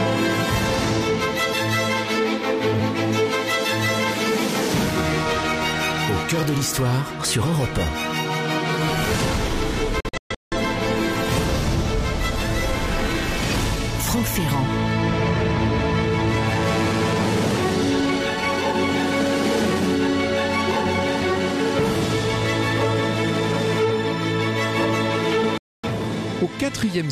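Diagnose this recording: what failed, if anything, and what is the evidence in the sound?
A digital broadcast dropout at the reception stage is what failed. The sound mutes abruptly, with a fade of about 3 ms, twice. From 10.00 to 10.57 s it breaks into several short holes totalling 384 ms over about 512 ms, the longest lasting 170.7 ms. From 25.58 to 25.89 s there is a 256 ms gap. The receiver got corrupt or missing frames, failed their checks and muted until clean frames resumed. The material sent during those holes is gone.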